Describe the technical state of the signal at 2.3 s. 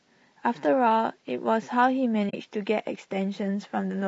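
At 2.3 s the speech drops into AAC frame loss with muting, a short gap from 2.29 to 2.34 s. The decoder had no data for this stretch and substituted silence, about 40 ms of it, consistent with two consecutive lost frames. Because the overlapping transform windows taper into and out of the zeroed region, the level fades down and back up rather than cutting off sharply, leaving a soft-edged hole.

Underneath this, the signal carries plainly audible low-delay AAC compression, likely AAC-ELD at a low rate in the region of 32 kbps. At this low bitrate the spectrum is quantized coarsely, so noise fills the gaps between the pitch harmonics and the speech sounds rough and grainy, with a dulled, somewhat synthetic upper band. This coloration is present on both sides of the dropout at 2.3 s.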